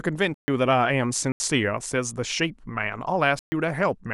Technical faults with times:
0.34-0.48 block of digital silence
1.32-1.40 block of digital silence
3.39-3.52 block of digital silence

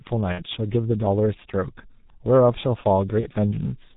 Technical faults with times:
0.00-3.96 G.723.1 codec
0.32-0.44 VoIP packet loss concealed by the speech codec
3.20-3.28 VoIP packet loss concealed by the speech codec

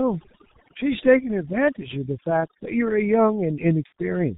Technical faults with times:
0.00-4.37 overdone noise removal
0.00-4.37 G.723.1 codec
3.86-3.92 VoIP packet loss concealed by the speech codec

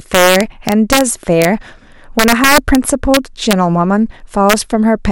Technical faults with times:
0.15-1.01 integer overflow
1.42-1.45 integer overflow
2.19-2.75 integer overflow
3.14-3.53 integer overflow
4.50-4.53 integer overflow

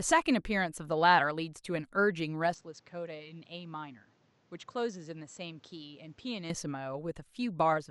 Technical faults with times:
2.54-6.50 input switched to a poorer device

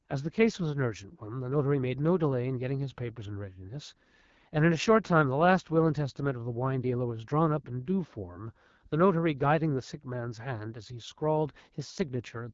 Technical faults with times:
0.00-12.54 AMR wideband (HD Voice) codec

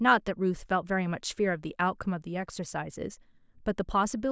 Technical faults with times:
none

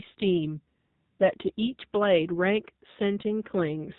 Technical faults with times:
0.00-3.98 AMR narrowband mobile codec
0.80-1.20 AMR comfort noise

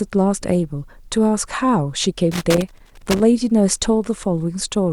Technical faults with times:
2.31-3.23 loose connector crackle

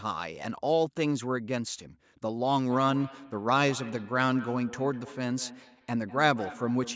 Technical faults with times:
2.70-6.96 feedback echo between two devices

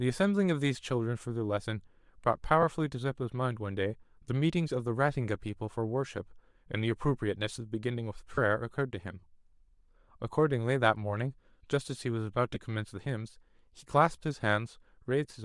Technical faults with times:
0.00-15.45 Bluetooth LC3 compression
2.62 lost LE Audio frames
8.35-8.38 lost LE Audio frames
12.54 lost LE Audio frames

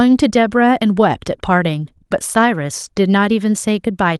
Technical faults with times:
none

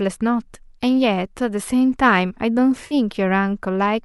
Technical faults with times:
2.87-2.94 AAC frame loss with concealment

